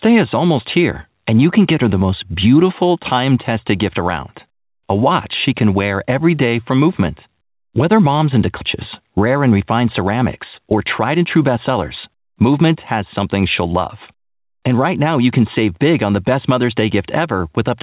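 At 8.61 to 8.75 s, right after "mom's into", queued audio was dropped, a skip ahead of about 0.7 s. Playback jumps forward with essentially no gap, so the sound on either side is spliced almost directly and a chunk of speech vanishes.

The receiver then trims excess buffered audio with a jitter buffer speed-up, cutting out short pitch-period slices repeatedly. From 9.17 to 9.61 s it runs at 112% speed, removing about 70 ms. From 10.58 to 13.29 s, ending just before "she'll love", it runs at 108%, shedding about 0.2 s. The pitch stays put while the delivery sounds hurried. Throughout, the call codec passes nothing above 4 kHz, which fits narrowband G.711 A-law.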